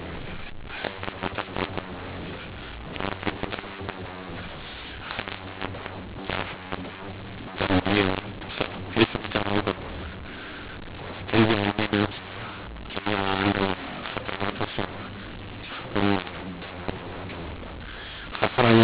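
Harsh, gritty distortion runs through the speech from start to finish, with levels that jump unpredictably: some sounds are too loud, others oddly thin, and the pauses fill with hiss instead of falling silent. This is mu-law and A-law mixed up. The telephone audio was encoded as mu-law, itself a normal narrowband G.711 signal at 8 kHz, but decoded as A-law. Each 8-bit code maps to the wrong level, lifting the quietest samples well above silence.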